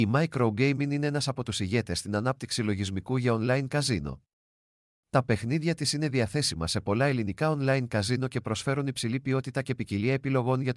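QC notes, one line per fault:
No faults heard anywhere in the speech.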